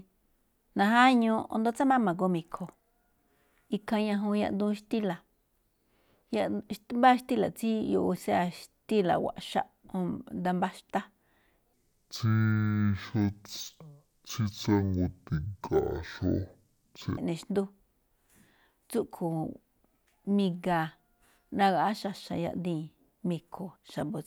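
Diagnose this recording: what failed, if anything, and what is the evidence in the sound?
A stereo-read-as-mono fault at the sample-format conversion stage, from 11.73 to 17.18 s: the speech slows to half speed and drops an octave. Interleaved left and right samples are being read in sequence as a single channel. A spectrogram shows energy compressed downward, with a faint mirrored copy in the upper half.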